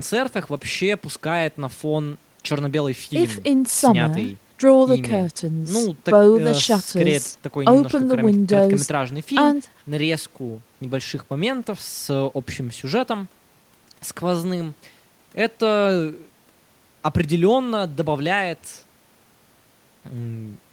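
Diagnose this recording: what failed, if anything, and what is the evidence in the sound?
Nothing in the recording points to a failure at any stage of the chain; the signal stays continuous and stable throughout, with nothing audible that calls for diagnosis.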